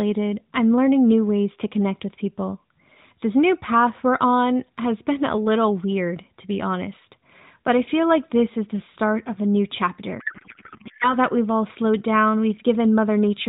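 From 10.20 to 11.16 s, between "start of a new" and "that we've all slowed", a codec payload misread turns the narrowband AMR speech into garbled, warbling noise that barely tracks it. The decoder is reading each frame's fields in the wrong places, which sounds like octet-aligned AMR being read as bandwidth-efficient.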